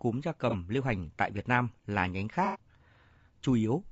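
A speech recording with codec damage that is plainly audible across the whole clip. The voice sounds rough and grainy, with noise filling the gaps between harmonics and a thin, synthetic-sounding top band. This is likely low-delay AAC compression, as in AAC-ELD, running at a modest rate in the region of 32 kbps. At this rate the coder quantizes the spectrum coarsely, so noise spreads between the harmonics, and it rebuilds the upper band parametrically. Two dropouts show AAC frame loss with concealment, where the decoder patched missing data from the preceding spectrum. The first, from 0.50 to 0.55 s, lasts 30 ms, which fits a single lost frame, and leaves a brief smeared, noisy blip. The second, from 2.45 to 2.59 s, lasts 90 ms, which points to three consecutive frames. It is concealed the same way from the preceding spectrum until normal decoding resumes.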